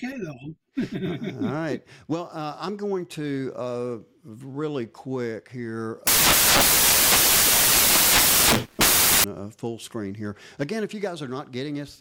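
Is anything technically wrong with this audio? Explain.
Yes. From 6.07 to 9.24 s, samples built from the wrong bytes turn the audio into loud, harsh broadband noise: misassembled bytes promote low bits, filling the spectrogram across the band and the waveform densely.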